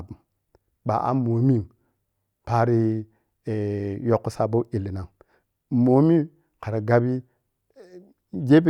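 No audible technical fault disturbs the speech signal at any point in the recording.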